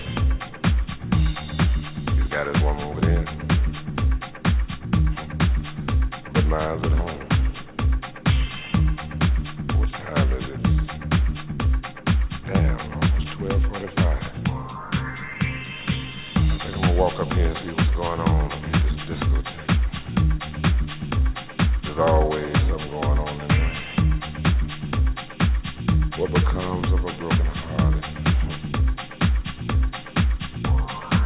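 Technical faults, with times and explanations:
No technical faults can be heard in the clip.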